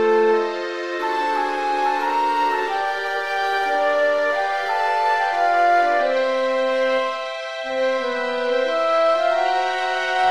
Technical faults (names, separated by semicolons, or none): adaptive stream at a lower bitrate